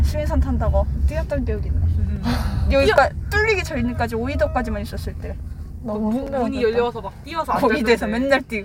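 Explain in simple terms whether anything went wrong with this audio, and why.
Two small glitches stand out, at 2.98 s and again at 6.27 s. Each is a quick spot where the sound jumps forward a tiny bit, with no gap of silence. That's most likely a dropped buffer (overrun): the recording software didn't grab a chunk of audio in time, so it got overwritten and the two sides were stitched together. Roughly a hundredth of a second went missing at the first spot, and about half that at the second.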